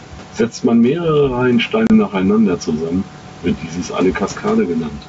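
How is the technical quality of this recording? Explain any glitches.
The recording has two problems: the level pumps all the way through, and there's one short dropout just before the two-second mark.

Gain pumping runs the whole length. The gain swings by around 10 dB as the speech gets loud and quiet. It's most likely from the input gain being set way too hot, with a fast limiter or compressor clamping down on every peak, so everything sounds squashed.

Packet loss on an ADPCM call happens between 1.87 and 1.94 s. About 30 ms of audio, a few packets' worth, drops out as a hard-edged hole of silence. Because the decoder's predictor and step size have drifted from the sender's, the speech comes back with a bit of grit, then settles over the next few tens of milliseconds. The speech is clear up to around 7 kHz, as expected from G.722 running at its full 64 kbit/s.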